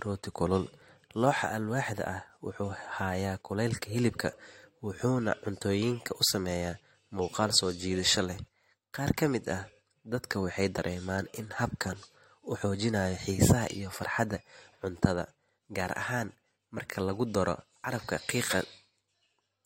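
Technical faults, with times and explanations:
0.82 s, 10.78 s and 16.78 s: overlap between stream segments. Overlapping segment timestamps remove 8 to 16 ms of speech. The waveform jumps, heard as tiny skips.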